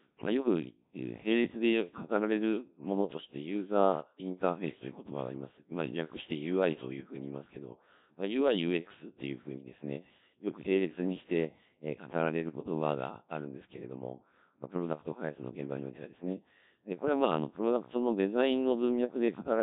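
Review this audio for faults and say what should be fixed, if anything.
The speech carries Codec 2 vocoder damage throughout. It sounds robotic and buzzy, which fits roughly 1.3 kbit/s. The voice is resynthesised from sine waves, not kept. Use a higher-bitrate waveform codec for this path.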